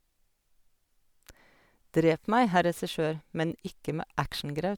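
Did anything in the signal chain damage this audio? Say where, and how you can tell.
No, nothing in the signal chain damaged this audio.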